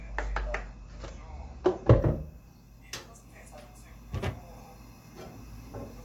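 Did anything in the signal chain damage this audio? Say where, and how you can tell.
Yes, and it's in the delivery path: an adaptive stream starting at a low bitrate. From 0.0 to 2.0 s there's nothing above about 7.8 kHz and the codec artefacts are thicker, which fits an AAC-LC stream around 32 kbit/s. At 2.0 s the top end snaps back with no gap, consistent with a step up to around 96 kbit/s. The player opened on a cheap rendition to start fast, then switched once it had measured the connection.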